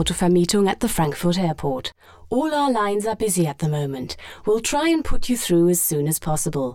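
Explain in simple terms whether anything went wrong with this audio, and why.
From 1.05 s onward the sound turns hollow and phasey. This is channel delay (comb filtering): one side lags about 10 ms, so combining them cancels evenly spaced frequencies.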